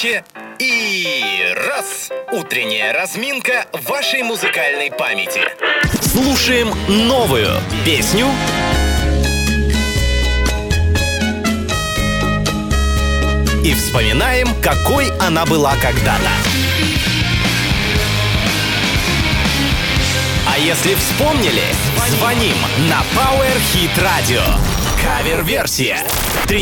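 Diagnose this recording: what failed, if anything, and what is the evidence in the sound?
Analogue wiring stage: DECT cordless phone buzz from 17.41 to 25.41 s, a thin 100 Hz buzz roughly 10 dB below the signal as the audio circuit rectifies a nearby radio burst sent every 10 ms.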